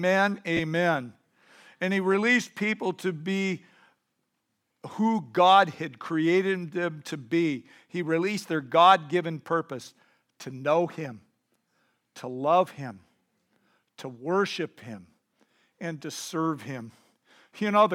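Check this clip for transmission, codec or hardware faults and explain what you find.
One transmission fault is audible: a brief dropout near the start of the speech, heard against the light, ordinary traces of lossy compression.

Lost LE Audio frames, 0.57 to 0.60 s: about 22.5 ms of the Bluetooth LE Audio stream never arrived, which fits three 7.5 ms LC3 frames. The decoder filled the gap by repeating the last received spectrum with randomised signs, so the tonal detail of the speech turns into a short noisy smear before the following frames resume cleanly.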